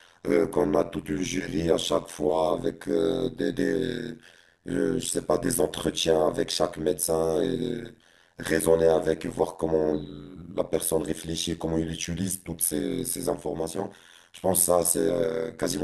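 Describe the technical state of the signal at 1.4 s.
Overlap-add ripple is present at 1.4 s, as it is across the whole clip. The speech was split into windowed frames and rejoined with an overlap whose gains don't sum evenly, so the level dips by about 60 dB once per frame, at around 100 times a second. That gives a harsh, buzzy, metallic sound. Unlike dropouts or gating, it never lets up or follows the speech, staying locked to one fixed rate.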